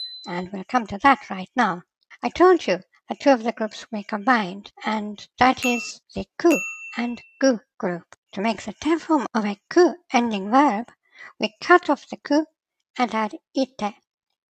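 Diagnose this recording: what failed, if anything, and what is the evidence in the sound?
Nothing in the signal points to a failure at any stage of the chain, from the analogue path through conversion, buffering, processing, transmission, storage or playback.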